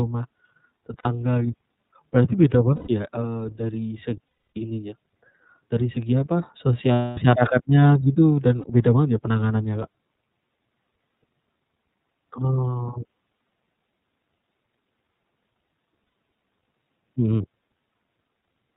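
The whole clip runs through the iLBC codec, which sounds like its 30 ms, 13.33 kbps mode. Everything above 4 kHz is gone, so the speech sounds narrowband, and the frame-by-frame excitation coding leaves it plainly rough and a bit synthetic from start to finish.

Then there are lost iLBC frames at 0.99, 2.76, 4.27, 6.93, 8.61 and 16.04 s, lasting 60, 120, 300, 240, 30 and 90 ms. The decoder fills each gap by repeating the last pitch cycle mixed with noise, which comes out as a held, buzzy vowel. The 300 ms and 240 ms gaps fade, and the voice snaps back right away after each one.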